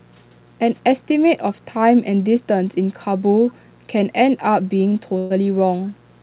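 A mains buzz runs through the whole of this speech recording: a steady, raspy 60 Hz hum sitting well below the talker, whose sharp switching spikes from a dimmer, rectifier or poorly shielded line spread harmonics up through the band, which ends at 4 kHz on this narrowband call path. A burst of packet loss hits from 5.18 to 5.32 s: about 120 ms never arrived in time, so the receiver continued the last sound, turning it down, before jumping ahead, leaving that stretch missing. Background gated by the echo canceller follows from 5.71 to 5.82 s, where the room sound dips by about 13 dB for roughly a tenth of a second as the canceller clamps the microphone while the loudspeaker plays, then releases.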